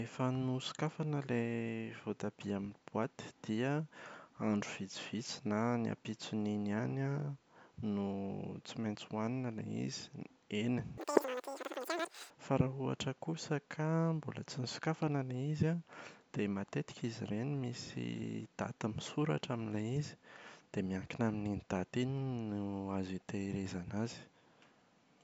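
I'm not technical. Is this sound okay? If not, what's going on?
No. From 10.98 to 12.30 seconds the speech suddenly races and squeaks, running about 2.76 times too fast and roughly 17.6 semitones higher. That's a wrong sample rate: audio recorded at 16 kHz was played back at 44.1 kHz without conversion, so speed and pitch jumped together.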